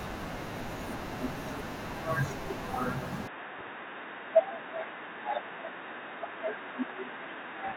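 A speech clip whose sound changes abruptly at 3.28 s and stays changed to the end: from there nothing is heard above 3.8 kHz, the level falls by about 5 dB, and a faint new noise floor appears. There is no gap at the change. This is likely an input switched to a poorer device. A filter or a codec dropping its bandwidth would narrow the sound without also shifting its level and background noise at the same instant.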